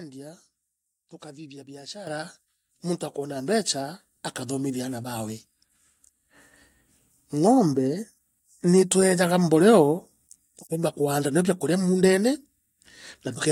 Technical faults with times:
2.07 microphone volume stepped up
3.36 microphone volume stepped up
5.40 microphone volume stepped up

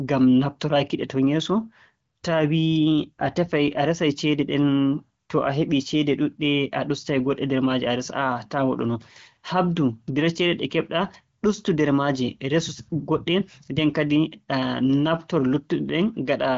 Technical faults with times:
none

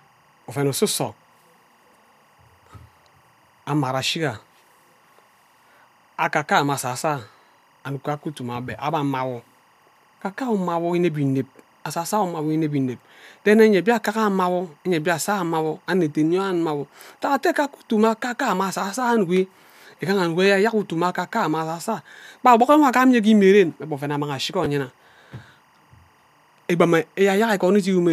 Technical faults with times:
0.00-28.12 timecode bleed
24.64 chunks out of order

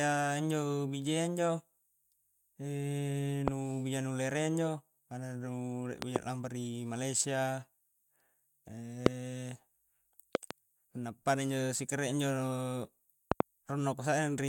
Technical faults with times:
3.48-3.50 loud pop
6.02-6.18 loud pop
9.06-9.08 loud pop
10.35-10.53 loud pop
13.32-13.42 loud pop

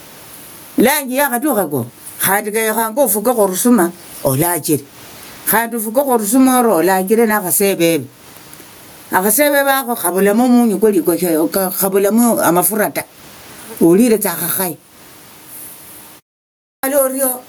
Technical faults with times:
0.00-17.48 gain pumping
16.45-16.83 clipped start after a pause

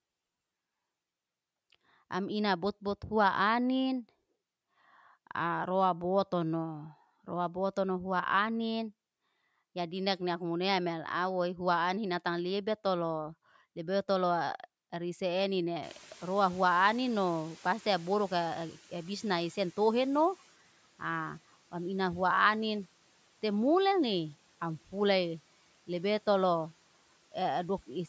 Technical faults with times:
15.82-20.50 noise suppressor catching up

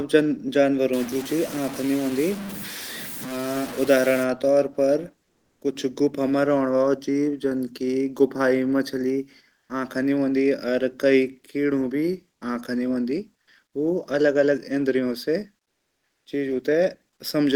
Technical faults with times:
0.93-4.24 low bit depth without dither
5.23-5.61 comfort noise in place of the background
9.59-9.69 comfort noise in place of the background
15.63-16.25 comfort noise in place of the background

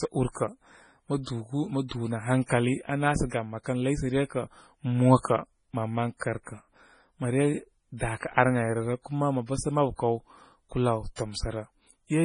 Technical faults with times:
0.00-12.25 MP3 compression

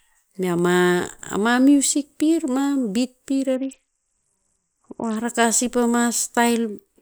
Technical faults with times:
3.56-5.16 Bluetooth SBC bit pool drop

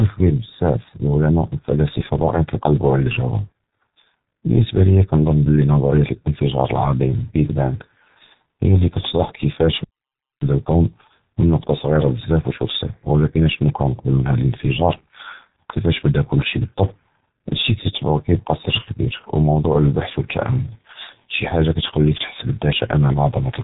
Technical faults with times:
0.00-23.63 G.723.1 codec
10.41-13.41 time-compressed catch-up

